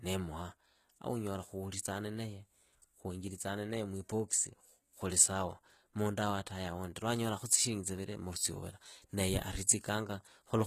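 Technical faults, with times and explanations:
Throughout, HE-AAC compression: the speech has a top end that is present but synthetic, with s sounds turning gritty and metallic and nothing at all above 14.9 kHz. That points to a low-bitrate encode around 20 kbps, likely HE-AAC, where only the lower band is coded and the treble is rebuilt from copied lower bands. Unlike a plain low-pass or MP3 smearing, the highs stay bright but their harmonics fail to line up with the coded band below.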